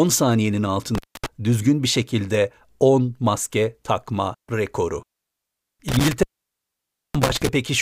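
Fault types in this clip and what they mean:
Intermittent contact: a loose cable or plug briefly breaks the signal path. The speech cuts out with crackle at each edge and faint hiss in the gap. It opens for 0.26 s near 0.95 s, then for 0.92 s between 5.88 and 7.49 s.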